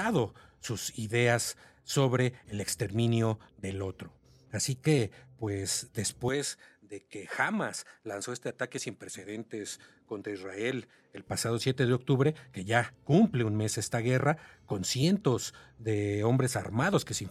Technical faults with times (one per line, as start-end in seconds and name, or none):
6.28-11.27 input switched to a poorer device